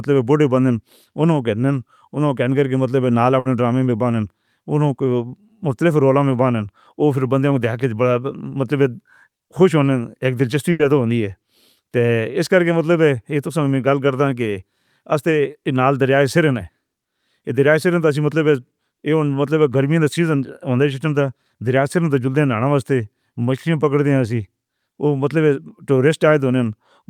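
Burst of packet loss occurs twice, at 3.39 to 3.47 s and again at 10.71 to 10.81 s. Both times a run of packets never arrived in time, so the receiver stretched the last speech it had and faded it down, filling about 60 ms and then 80 ms. Each dropout sounds like a brief held buzz or fading hiss, after which the speech resumes with that stretch missing.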